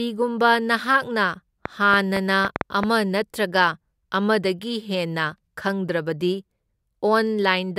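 From 1.66 to 2.84 s, a train of clicks ticks sharply over the speech, roughly seven similar pops at about 5 per second, unevenly spaced and peaking around 20 dB above the voice. A likely cause is electrical interference from nearby equipment or a faulty connection or power supply.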